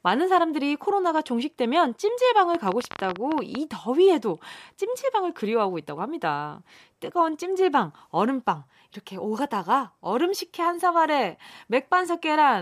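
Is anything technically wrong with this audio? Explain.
Yes. There is a train of clicks from 2.55 to 3.56 s. It is a burst of sharp, similar pulses arriving at about 14.9 per second, with uneven spacing. That makes around fifteen clicks in total. They peak roughly 10 dB above the speech, so they stand out clearly. The likely cause is electrical interference from nearby equipment or a faulty connection or power supply. Each event injects a brief pulse into the signal. It sounds like irregular ticking or popping laid over the speech.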